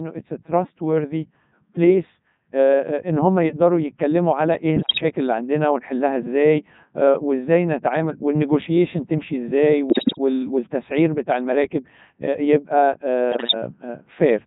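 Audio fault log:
throughout Codec 2 vocoder: the speech passes through a very low-rate vocoder that sends only pitch, voicing, energy and a spectral envelope, a heavy buzz that fits its 3.2 kbit/s mode. The decoder rebuilds everything from sine waves, so the voice sounds robotic and buzzy.
4.76–5.03 s, 9.90–10.18 s, 13.32–13.54 s bit errors on digital voice radio: flipped bits corrupt the parameters of whole vocoder frames, at several percent in the first burst and around a tenth in the later two. For about a quarter second each, the voice jumps in pitch, level and tone colour, breaking into bleeps, warbles and gibberish.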